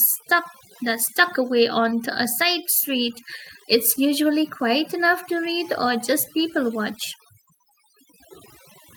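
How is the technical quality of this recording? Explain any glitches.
The technical quality is compromised by one fault. Overdone noise removal runs throughout: bands near the noise estimate are cut out, leaving twinkling silence and spectrogram gaps speckled with isolated dots.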